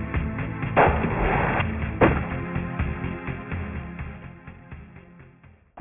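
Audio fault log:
Throughout: aliasing. Downsampling from 48 kHz to what sounds like 6 kHz without an anti-alias filter folds content above 3 kHz back down, adding gritty, metallic tones roughly 15 dB below the signal.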